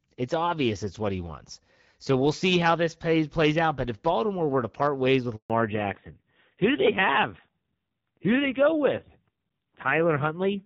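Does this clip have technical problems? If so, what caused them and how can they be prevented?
Yes. Right after "to part ways with", the sound cuts out abruptly at 5.36 s and stays silent for 140 ms, until 5.50 s. This is a handover gap: the call was passed from one network connection to another, and no speech frames arrived during the switch. Whatever was said in that stretch is simply missing, not muffled. Keeping the phone on a stable network, or enabling make-before-break handover so the new link is up before the old one drops, prevents it.

From 5.50 s to the end, the sound turns dull, boxy and rough, with nothing left above 4 kHz. This is a fallback to narrowband. After the handover, the call left the clear AMR-WB HD Voice link, which before the gap sounds lightly coded at about 12.65 kbit/s, and switched to the older narrowband AMR-NB codec. The coarse texture fits a low rate of around 5.9 kbit/s. 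Making sure both networks and handsets support HD Voice end to end keeps the call wideband after a handover.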